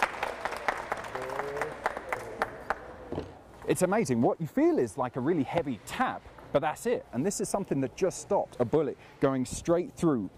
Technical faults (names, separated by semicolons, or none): none